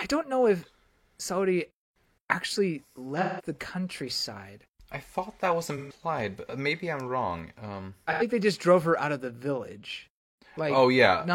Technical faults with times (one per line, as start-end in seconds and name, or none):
3.21-3.45 AAC frame loss with concealment
5.77-5.93 AAC frame loss with concealment
8.12-8.22 AAC frame loss with concealment